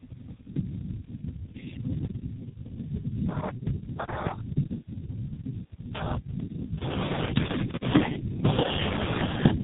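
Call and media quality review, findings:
Tandem speech coding, whole clip: rough, muffled, warbly speech, nothing above 3.8 kHz. The doubled roughness fits two low-rate codecs in a row, such as G.729A then G.723.1 via a G.711 hop. A single codec wouldn't compound it like this.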